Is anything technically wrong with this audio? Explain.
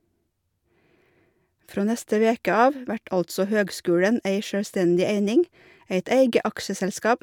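No, nothing technically wrong can be heard in this speech recording.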